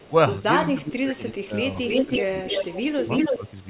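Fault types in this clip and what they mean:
Echo leak: The far end is likely playing the call on a loudspeaker, and its echo canceller let part of what its microphone picked up travel back. A delayed second copy of the voice appears: first briefly at the very start, about 25 dB under the speech and some 360 ms late, then from 1.83 to 2.22 s, 2.39 to 2.82 s and 2.98 to 3.51 s, lagging about 320 ms and roughly as loud as, or about 5 dB louder than, the speech itself.
Speech suppressed in double talk: While far-end sound was playing on the loudspeaker and this side was also talking, the echo canceller likely failed to tell its own talker from the loudspeaker echo and pulled both down. The voice dips in pieces: from 0.69 to 1.55 s, totalling around 0.7 s, with the deepest drop about 20 dB, then shorter dips of about 5 dB at 2.06 to 2.25 s and 3.29 to 3.42 s, overlapping the echo.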